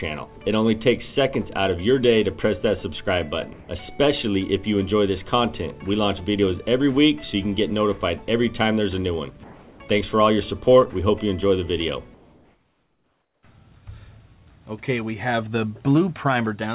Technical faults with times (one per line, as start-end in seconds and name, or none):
3.53-3.68 comfort noise in place of the background
9.44-9.80 sound dropped by the voice detector
12.14-13.43 comfort noise in place of the background